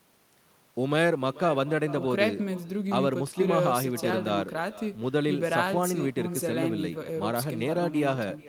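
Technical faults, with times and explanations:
Throughout: echo with no canceller. Every phrase is followed around 400 ms later by a fainter copy, about 17 dB below the direct speech, sounding thinner than the original. The far end is playing the call through a loudspeaker, and its microphone picks that playback up and sends it back. Because no echo cancellation removes it, the talker's own speech returns after the network round trip as a trailing shadow under everything said.
2.50 s: dropped samples. A single sharp click with no gap or audible loss of content, showing on a spectrogram as a thin vertical line across all frequencies. This is likely a handful of samples, well under a millisecond of audio, missing from the stream. The waveform then jumps straight from one value to a later one, and that abrupt step is a broadband transient that the ear hears as a click.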